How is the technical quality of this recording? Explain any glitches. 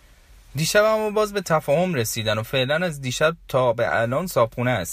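No glitches can be heard.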